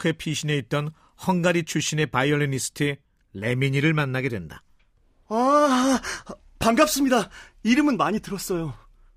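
No technical faults can be heard anywhere in this speech recording. The signal holds steady from beginning to end, with nothing interrupting or disturbing it.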